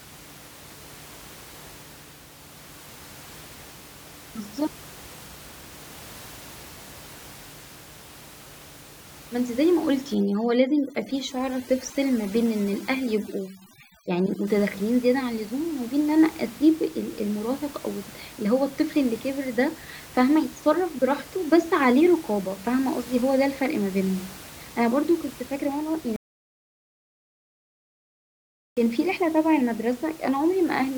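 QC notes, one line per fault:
10.15–14.47 s, overdone noise removal: the room noise, elsewhere sitting about 20 dB below the speech, drops and breaks up into twinkling, warbling specks. Noise reduction set too strong is cutting individual frequency bands down or out whenever they come close to its noise estimate. The quieter parts of the voice fall below that threshold and are stripped away along with the background.
26.16–28.77 s, audio dropout to silence: the speech cuts out abruptly and resumes just as abruptly, leaving a gap of 2.61 s of silence with no room tone at all. The complete absence of background noise shows the input was lost while recording carried on writing silence, likely from a disconnected device, a failed link or a momentary mute. Whatever was said in that stretch is gone.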